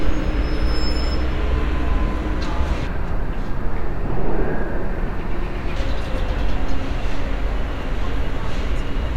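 From 2.87 s to 5.76 s the sound drops abruptly into a deep, dragging register, roughly seven semitones lower, with everything stretched out and sluggish, before snapping back to its normal pitch and pace. This is a section at the wrong speed: that stretch plays at about 0.64 times its original rate, so pitch and tempo fall together. The likely cause is an editor or player running this portion against the wrong clock.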